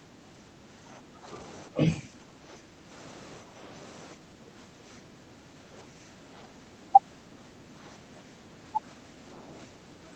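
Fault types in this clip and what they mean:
Speech suppressed in double talk: The echo canceller, likely faced with both ends talking at once, could not separate the near talker from loudspeaker echo and turned both down together. The speech dips in level repeatedly: about 10 dB down through the first 1.27 s, a brief, deeper cut of about 15 dB at 1.68–1.8 s, shallower dips of about 5 dB at 2.02–2.93 s and 3.43–3.62 s, then a mild, lasting pull-down from 4.15 s to the end.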